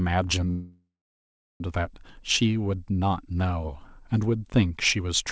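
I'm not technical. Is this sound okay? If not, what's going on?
No. From 0.50 to 1.63 s there is a call audio freeze. The sound stalls, a fading buzz or hiss fills in, then about 0.7 s of silence. Delayed network data is the likely cause. When it resumes, the speech picks up where it stopped, with nothing lost.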